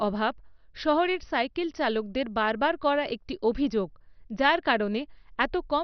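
Throughout the speech, the sound is dull and carries a gurgling, granular roughness, and nothing survives above 6.1 kHz. This is most likely heavy MP2 compression at a bitrate starved enough to suggest roughly 48 kbps. The encoder shuts off whole upper sub-bands and quantises the remaining ones coarsely. On a spectrogram, energy stops at a hard ceiling near 6.1 kHz, with blocky, flickering patches beneath it where bands switch on and off.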